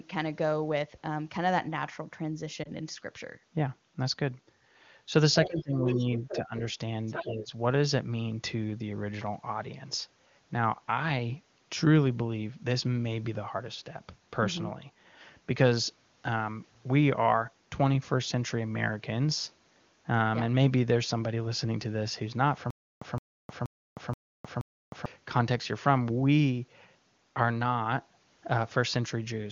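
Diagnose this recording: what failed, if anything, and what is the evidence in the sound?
A brief dip and warble at 2.63 to 2.71 s comes from lost AMR speech frames. A single 20 ms frame failed in transmission and the decoder concealed it by extrapolation.

A faint second voice, about 10 dB below the talker, appears at 5.45 to 5.62 s, 5.88 to 6.39 s and 7.06 to 7.31 s. This is the other side's voice leaking through, likely because the call's echo canceller left residual loudspeaker pickup.

The talker's own voice ducks at 5.47 to 5.98 s (by about 20 dB), at 6.33 to 6.52 s and at 7.23 to 7.53 s (about 10 dB). This is speech suppressed in double talk, likely the echo canceller attenuating both voices at once.

From 22.70 to 25.06 s, a 167 ms burst repeats five times every 477 ms, with 310 ms of digital silence between repeats. This stutter with silent gaps is likely a stalled playback or stream buffer replaying its last fragment, and the audio due in that span is lost.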